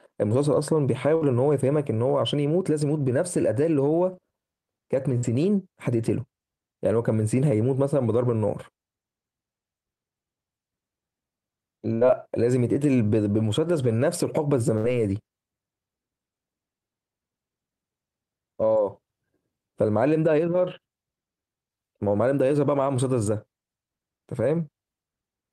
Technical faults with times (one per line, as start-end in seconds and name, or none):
1.15-1.24 burst of packet loss
5.17-5.26 burst of packet loss
11.95-12.04 burst of packet loss
14.77-14.87 burst of packet loss